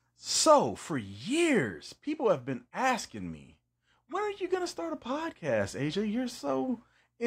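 Speech recording with no audible technical faults.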